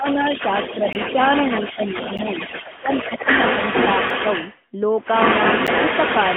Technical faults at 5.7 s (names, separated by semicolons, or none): AMR narrowband mobile codec; echo leak; block of digital silence